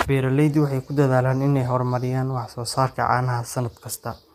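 Throughout, the speech has likely passed through low-delay AAC compression (AAC-ELD), whose short frames resolve pitch harmonics coarsely, at what sounds like about 32 kbps. The voice is plainly rough and grainy, with noise between harmonics and nothing above 15.6 kHz.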